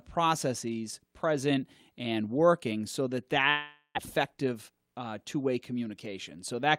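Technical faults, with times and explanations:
3.49–3.99 s, long network dropout: The speech smears into a fading buzz, then about 50 ms of silence. Roughly 400 ms is lost, likely from packets that never arrived.
4.55–5.00 s, jitter buffer speed-up: The speech runs hurried at 111% speed with unchanged pitch. The receiver cut about 50 ms in short pitch-period pieces to reduce a backlog.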